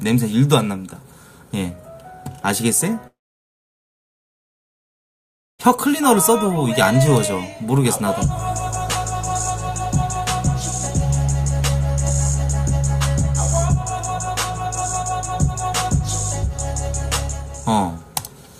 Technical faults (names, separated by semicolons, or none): long network dropout